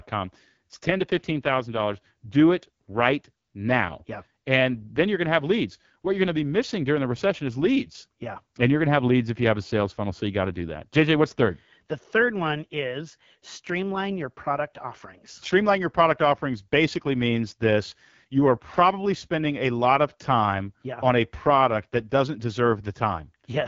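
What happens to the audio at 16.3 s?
At 16.3 s you're hearing AMR wideband (HD Voice) codec damage that runs through the whole clip: speech modelled coarsely, rough and raspy, consistent with a low mode near 8.85 kbit/s.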